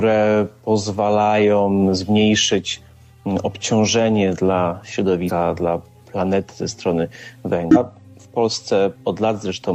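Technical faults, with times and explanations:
5.25–5.31 s and 7.71–7.77 s, damaged data in a compressed stream: two brief 60 ms glitches where corrupted bytes in the encoded stream made the decoder misread those frames and lose sync, producing garbled output until it locked onto the next valid frame header.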